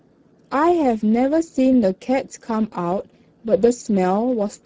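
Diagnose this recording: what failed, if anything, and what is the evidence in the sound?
The failure is at the codec stage: Speex coding degrades the speech for the whole clip. The speech sounds noisy and hoarse from start to finish, consistent with a low-quality setting near 10 kbps. With so few bits for the excitation signal, the voiced sounds lose their clean periodic pulse, giving a buzzy, rough texture. On a spectrogram the harmonic stripes look smeared and broken, with noise filling the gaps between them. The waveform has ragged, irregular cycles.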